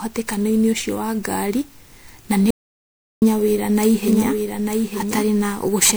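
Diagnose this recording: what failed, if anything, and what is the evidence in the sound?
The codec stage took a beating. The whole clip sounds swirly, hollow and smeared, with soft attacks: generation loss, likely from around seven MP3 re-encodes near 128 kbit/s.

At 2.51 s the speech cuts to dead digital silence until 3.22 s, roughly 0.71 s gone. That's an audio dropout to silence, likely a lost input while silence kept recording.

From 4.08 s to the end there's a doubled audio track: a dry copy about a second behind and roughly 5 dB down, starting abruptly, likely a second slower capture path.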